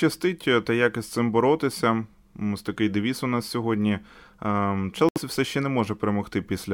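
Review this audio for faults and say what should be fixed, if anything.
Bluetooth stall at 5.09 to 5.18 s: the speech cuts to 72 ms of silence, likely from interference delaying packets until the headphone buffer ran dry. To prevent it, keep the phone close to the headphones and away from 2.4 GHz interference, or use a wired connection.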